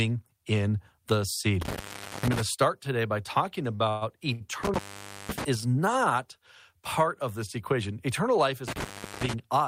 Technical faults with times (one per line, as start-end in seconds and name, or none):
1.61-2.41 intermittent contact
3.75-3.81 short stall from a late packet
3.89-4.03 call audio freeze
4.33-4.42 short stall from a late packet
4.63-5.44 intermittent contact
8.68-9.34 intermittent contact